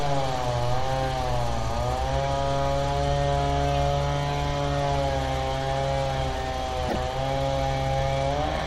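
At 6.88–6.96 s the sound jumps ahead through a brief glitch, likely a broken MP3 bit reservoir; 24 ms frames decode foreign bytes, smearing the spectrogram.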